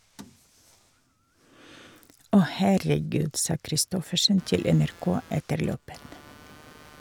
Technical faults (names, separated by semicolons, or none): computer activity noise